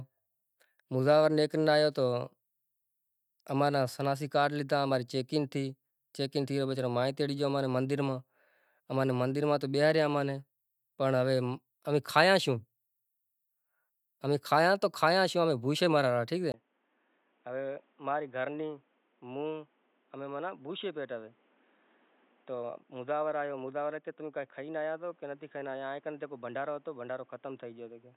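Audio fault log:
16.52 s to the end: input switched to a poorer device. After a 20 ms gap, speech turns dull and boxy, nothing above 3.8 kHz, about 10 dB quieter, a new noise floor roughly 35 dB down, likely from a narrower-band microphone or headset taking over.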